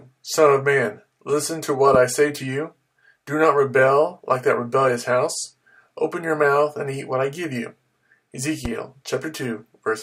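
A loud pop lands at 1.94 to 1.97 s and again at 8.65 to 8.68 s, each a single sharp click standing well above the audio, the first louder than the second. A sudden voltage pulse from a plug, switch or static discharge is the likely cause.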